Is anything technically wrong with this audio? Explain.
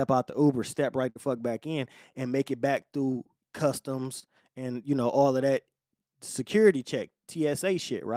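Yes, two network faults interrupt this speech. The first is a burst of packet loss from 1.09 to 1.17 s, just before "fuck back in and". A run of packets never arrived in time, so the receiver extended the last sound for about 59 ms and faded it down before resuming. About 60 ms of real speech is gone, and the gap is heard as a brief held, dimming tail followed by a jump forward.

The second is a short concealed packet loss from 4.19 to 4.27 s, right before "and you know all". A smaller piece of the stream arrived too late for the decoder, which covered the hole with about 29 ms of synthesized continuation built from the preceding sound, then blended back into the real signal. About 20 ms of speech is lost and roughly 13 ms more is trimmed in the merge, producing a quick smear or slight wobble rather than an obvious dropout.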